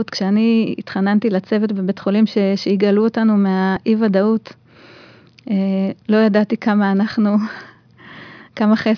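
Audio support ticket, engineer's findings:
No faults found on the signal path; dropouts, clipping, timing errors and device-side artefacts are all absent from the recording.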